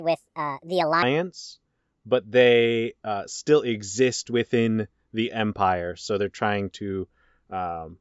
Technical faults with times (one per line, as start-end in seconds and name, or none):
0.00-1.03 wrong sample rate